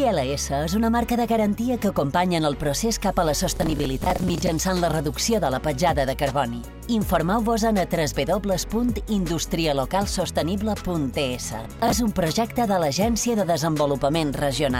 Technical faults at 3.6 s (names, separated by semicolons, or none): processor overload crackle